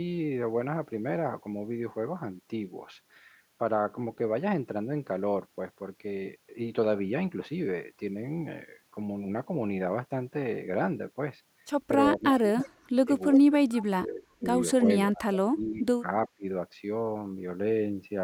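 Speech suppressed in double talk affects this speech recording at 12.17–13.09 s, 13.35–14.47 s, 14.79–14.88 s, 15.10–16.06 s and 16.28–16.44 s. The voice dips by up to about 35 dB, and only slightly around 14.8 s, most likely because an echo canceller, facing both sides talking at once, turned everything down. Echo leak appears at 12.60–12.69 s and 13.74–13.82 s as brief scraps of a copy of the voice delayed by 338 ms and about 20–25 dB below it, likely loudspeaker pickup that the far side's canceller failed to remove.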